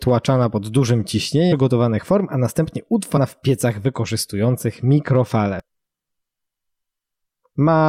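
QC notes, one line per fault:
1.51 s, 3.16–3.18 s, 5.60–5.62 s: damaged data in a compressed stream. Short chirps, squawks, clicks or holes break the speech. Corrupt bytes make the decoder misread frames and lose sync.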